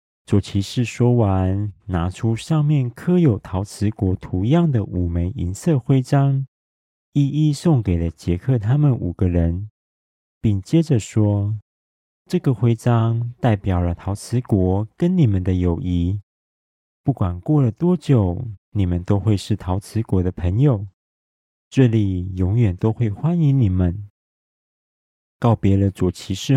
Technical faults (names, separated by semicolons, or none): none